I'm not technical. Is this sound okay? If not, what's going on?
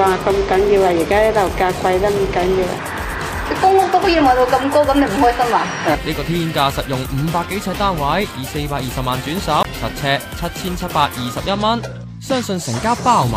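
No. At 9.63 to 9.65 s the sound drops out to silence for about 19 ms, a tiny gap, and then carries on. This is likely a Bluetooth stall, where radio interference delays the wireless data and the headphones briefly run out of audio to play.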